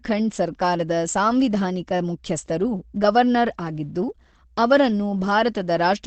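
From start to finish, the speech sounds muffled and hoarse, with nothing above about 8.5 kHz and the damage plainly audible. Unlike MP3 at a low bitrate, there is less swirling, and it is more than a clean low-pass filter, because the voice itself turns hoarse. That points to Opus compression, likely at around 16 kbps in its speech-oriented SILK mode at wideband, where the encoder models the voice rather than preserving its full spectrum.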